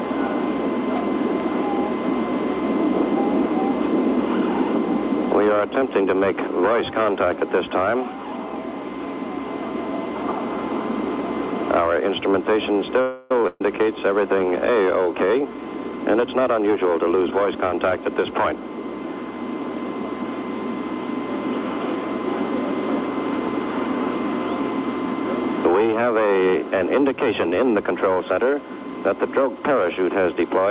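At 13.01 s a call audio freeze begins and lasts until 13.43 s. The last sound is drawn out as a fading buzz or hiss for roughly 0.29 s. The likely cause is packets held up in transit, so the jitter buffer ran dry and the receiver filled the wait. When playback resumes, it picks up where it stopped. Nothing is lost, but the delay grows by that 0.29 s.

Right after, from 13.47 s to 13.61 s, comes a burst of packet loss. Several packets in a row never arrived in time. The receiver stretched the last sound and turned it down across the gap, which ends in a short silence of about 10 ms. The audio then carries on further ahead. About 130 ms of material is simply gone.

From 15.06 s to 17.17 s a jitter buffer speed-up is heard. The buffer was holding more audio than it wanted. To drain it, the receiver cut out many tiny slices, each a pitch period or so long. Playback runs at 113 percent speed with the pitch unchanged. 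Altogether about a third of a second is removed, and this stretch sounds hurried.

Throughout, the call path caps the band at 4 kHz, which points to a G.711 A-law codec at 64 kbps.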